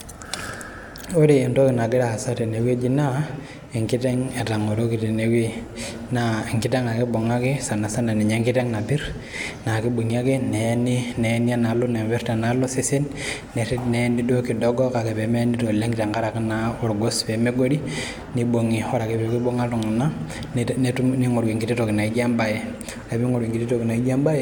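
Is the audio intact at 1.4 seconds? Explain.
Yes, the audio at 1.4 seconds is intact, with no dropout, click, distortion or other fault at that point.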